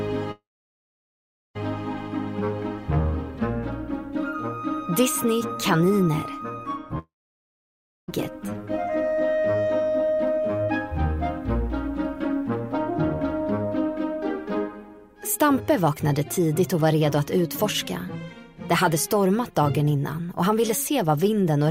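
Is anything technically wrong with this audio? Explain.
Yes. From 0.31 to 1.57 s and from 6.99 to 8.10 s, the sound trails into a fading buzz, then about 1.1 s and 1.0 s of silence. A long network dropout is the likely cause: the receiver stretched the last audio, then gave up. Unlike a pause, the sound resumes further on, with the gap's content missing.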